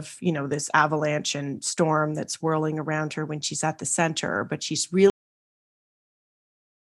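At 5.10 s, right after "the center but she's", the speech stops dead in the middle of a sound and falls straight to digital silence, with no trailing decay or room tail, and that silence runs to the end of the clip. This is a cut-off end: the final buffers of audio were never written out or played back, so the recording simply ends where the data ran out rather than where the speaker finished.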